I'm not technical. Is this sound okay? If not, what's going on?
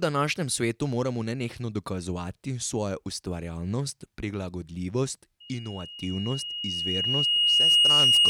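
No, it isn't. At about 5.4 seconds a single high whistle starts, near 2.9 kHz, and it keeps going to the end. It swells over roughly two seconds until it is louder than the speech. This is loudspeaker feedback squeal. The microphone is hearing the loudspeaker it feeds. At that one pitch, the sound goes round the loop and comes back stronger each time. So it grows by itself until something limits it.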